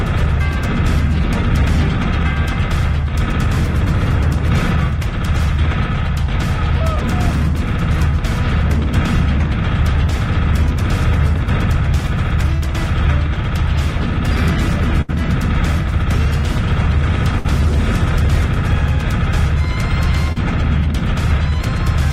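At 15.01–15.10 s and 17.38–17.46 s, bursts of packet loss are covered by a fading extension of the last sound, 70 ms and 60 ms long. Each one skips 60 ms of audio. On a spectrogram these show as smeared, decaying bands ending in an abrupt jump. At 20.32–20.38 s, a short concealed packet loss patches 40 ms of missing audio with 33 ms of synthesized continuation, heard as a brief smear, with a small blurred patch on the waveform.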